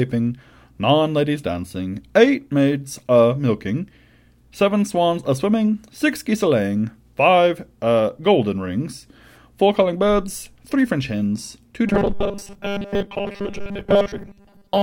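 From 11.87 s to 14.83 s, new audio likely stopped reaching the playback stage in time, so the software filled the gaps by repeating a very short stretch of the last buffer, about 5 ms, while the real speech was skipped. Since most of this section is made of these repeats, the speech becomes robotic sound from repeated short buffers: a rigid, metallic buzz fixed at 200 Hz that only roughly follows the speech.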